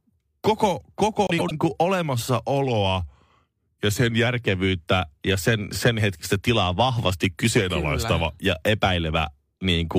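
At 1.27 s, two neighbouring runs of frames, each about 104.5 ms long, reached the decoder in swapped order and were played that way. They fit blocks of about four frames each. Through 1.52 s the speech therefore comes out with its two halves exchanged, a brief garbled flutter. Nothing is lost in time; the material is just rearranged.

From 2.65 s to 4.27 s, and again from 7.57 s to 8.32 s, the playback rate drops by 5.6 percent and then snaps back. This is likely a drift correction step, where clock-matching software slows output in one jump to let its buffer refill. Speed and pitch fall together by almost exactly one semitone, so the speech sounds slowed and detuned downward before abruptly returning to normal.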